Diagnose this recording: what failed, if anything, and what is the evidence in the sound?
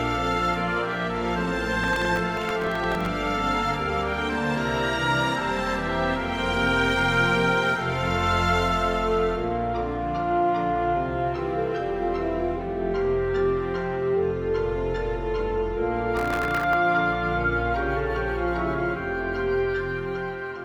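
The driver/buffer stage failed with processor overload crackle in two bursts, from 1.84 to 3.06 s and from 16.17 to 16.73 s. Each burst is a gritty tearing laid over the sound, built from a few dozen hard-edged clicks. The processor missed deadlines for very short buffers, around a millisecond and a half each, and every late buffer was filled with stale audio. The crackle stops when the load eases.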